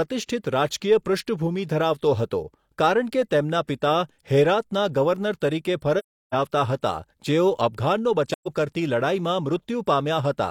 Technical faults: AAC frame loss with muting

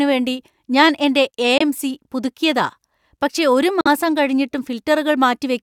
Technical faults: Bluetooth dropout

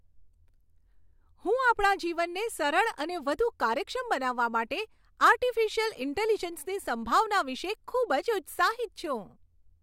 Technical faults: none

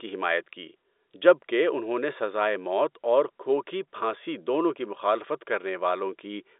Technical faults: none

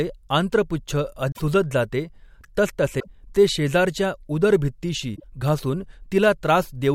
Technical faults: damaged data in a compressed stream

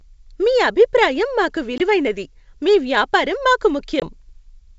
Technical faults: packet loss on an ADPCM call

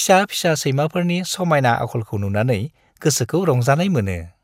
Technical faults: DAB burbling

